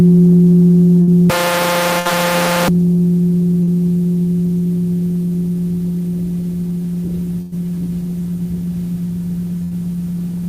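A recording of everyday sounds with dropouts and a stretch of digital distortion. Four bursts of packet loss occur, at 1.01 to 1.09 s, 1.99 to 2.07 s, 7.41 to 7.54 s and 9.64 to 9.73 s. Each time the receiver keeps the last sound going and lets it fade: roughly 60 ms in the first two, about 100 ms at 7.41 s with no drop to silence, and about 75 ms at 9.64 s. Playback then resumes further on, with a similar length of audio simply gone. That skip after a decaying hold or hiss is what separates these from the single short concealed packet loss at 3.63 to 3.69 s. There, about 40 ms was patched with a continuation of the preceding sound and blended straight back in, so it comes across as a brief smear or wobble with no audible fade. From 1.30 to 2.68 s the audio turns distorted, and the quieter moments fill with noise instead of falling quiet. The likely cause is a stuck bit, one data bit held at a fixed value so that roughly half the samples are shifted by a set amount. 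Clipping would leave quiet passages clean, but here the distortion follows the waveform and stays present even at low level. The second packet-loss burst falls inside this distorted stretch.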